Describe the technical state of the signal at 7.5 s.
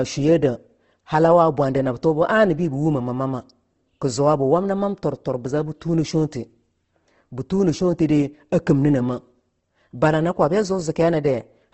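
At 7.5 s the speech carries Opus compression damage, present throughout the clip: grainy, rough texture with nothing above 8.2 kHz, likely from low-rate CELT coding near 16 kbps filling starved bands with noise. Unlike MP3, it has few spectral holes and swirls less.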